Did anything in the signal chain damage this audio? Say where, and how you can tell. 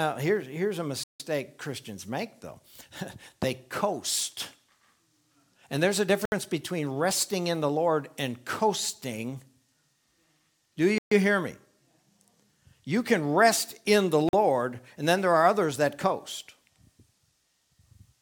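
Yes, at the playback stage, most likely a Bluetooth stall on the wireless link. When delayed packets leave the receiver's buffer empty, output simply halts until fresh data arrives. The sound drops to silence four times: 1.03 to 1.20 s (about 163 ms), 6.25 to 6.32 s (67 ms), 10.98 to 11.11 s (132 ms) and 14.29 to 14.33 s (45 ms). Each gap is silence of uneven length, after which the audio resumes.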